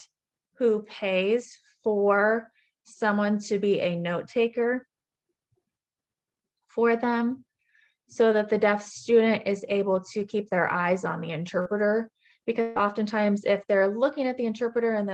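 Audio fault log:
11.61 to 11.67 s: short concealed packet loss. About 40 ms of the stream arrived too late or not at all, and the receiver extrapolated the preceding sound across the hole before blending back, so a brief smear or wobble replaces roughly 39 ms of the real audio.
12.61 to 12.77 s: burst of packet loss. A run of consecutive packets, about 140 ms in total, never reached the decoder in time. Concealment stretched the last sound over the gap, fading it as it ran, so a held buzz or dying hiss covers about 142 ms without dropping to silence, and the audio then resumes further on with that stretch gone, all carried over an Opus call path whose coding limits the top end to about 12 kHz.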